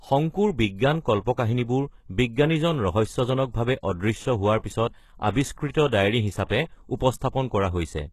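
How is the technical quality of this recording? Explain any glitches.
Quality is noticeably degraded by a single fault that runs through the whole clip. The treble sounds bright yet artificial, s sounds come out gritty and lispy, and there is nothing above about 12.3 kHz. This likely comes from HE-AAC compression at a very low rate, which fits roughly 16 kbps. Only the lower spectrum is truly coded; the upper band is rebuilt by copying lower bands upward, so the harmonics no longer line up.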